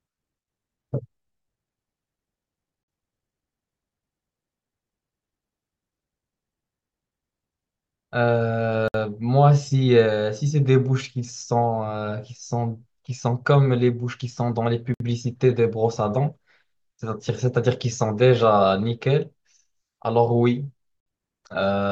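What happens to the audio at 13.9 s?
Nothing goes wrong at 13.9 s; the speech runs through that moment intact.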